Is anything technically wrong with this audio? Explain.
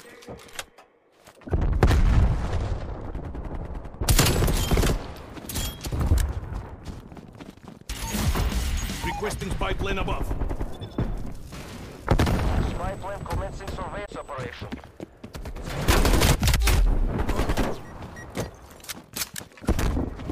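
Yes. At 14.04–14.09 s there is damaged data in a compressed stream: corrupt frames make the decoder lose sync and resynchronise, giving a brief glitch.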